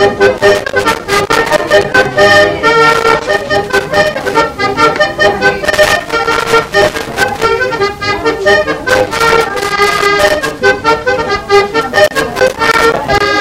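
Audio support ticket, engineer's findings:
Hard clipping throughout: peaks driven about 8 dB past a gain stage or converter's limit, so a few percent of samples are flattened. Harsh fuzz on loud sound. Waveform shows squared-off tops; spectrogram shows harmonic smear high up.

Loose connector crackle at 0.38–2.17, 2.90–4.38, 5.65–7.45, 8.90–10.59 and 11.81–13.28 s: worn or dirty contact chopping the signal. Irregular scratching bursts. Spectrogram shows broadband vertical streaks; waveform shows dropouts and spikes.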